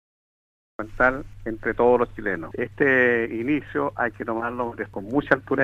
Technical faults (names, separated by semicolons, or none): cut-off start